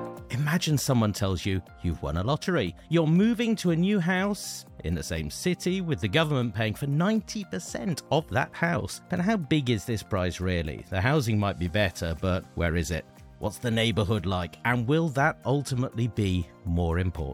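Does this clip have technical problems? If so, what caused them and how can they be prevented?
No, there are no technical problems to report.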